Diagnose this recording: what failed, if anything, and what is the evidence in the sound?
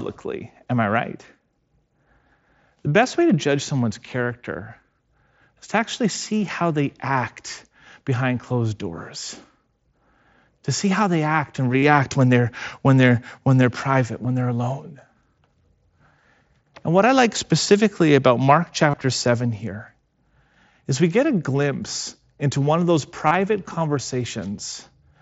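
The radio link dropped out, giving concealed Bluetooth headset packet loss. Brief buzzy, level-held patches appear at 11.78–11.83 s, 14.23 s, 18.90–18.94 s and 23.27–23.35 s. Each is 15 to 45 ms of speech patched by repeating recent waveform through the mSBC stream.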